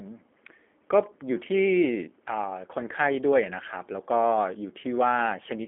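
The speech has passed through a G.729 codec for its full length, most likely the G.729A variant. The coder discards the actual waveform and sends only a vocal tract filter, a pitch predictor and a sparse set of pulses per frame, a rate that points to about 8 kbit/s. The rebuilt speech sounds plainly rough and slightly synthetic. It sits in a narrow telephone band from about 250 Hz up to 3.4 kHz, with nothing above that.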